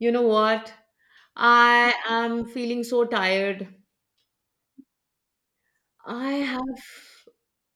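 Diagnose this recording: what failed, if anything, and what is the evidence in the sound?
No fault detected anywhere.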